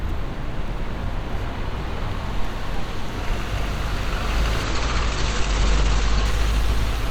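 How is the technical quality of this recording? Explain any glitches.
The recording of everyday sound has two kinds of fault: three clicks early on, and a loss of quality near the end.

Dropped samples cause sharp single clicks at 0.68, 1.79 and 2.74 s. Each is likely a fraction of a millisecond of missing audio. The waveform jumps straight to a later value. That step is heard as a brief tick.

A call bitrate drop starts at 4.64 s and lasts to the end. The encoder was told to use far fewer bits. It codes coarsely and cuts the top band from 20 kHz to 8 kHz. The sound turns muffled and rough, worst for about 1.4 s. This fits a fall from about 128 kbps to about 12 kbps.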